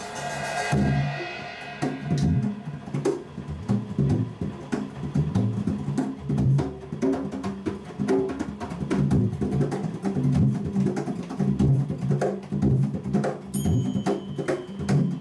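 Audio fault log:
No fault can be heard anywhere in the audio.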